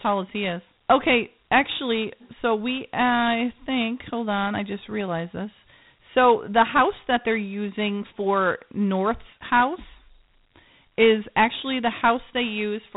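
Dialogic VOX ADPCM runs throughout. Its coarse four-bit coding fits 8,000 samples a second. Nothing passes above 3.8 kHz. A gritty hiss trails the speech.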